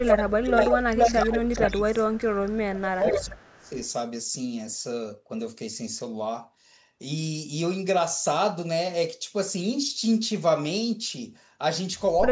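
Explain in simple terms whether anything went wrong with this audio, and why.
At 0 to 0.88 s and again from 1.21 to 3.76 s the voice keeps dipping and dropping out. That's speech suppressed in double talk, likely because both sides talked together.

There's also an echo leak: a second copy trails about half a second behind, at 0.06, 0.45 to 1.16, 1.52 to 1.7 and 2.15 to 3.7 s, likely from a loudspeaker.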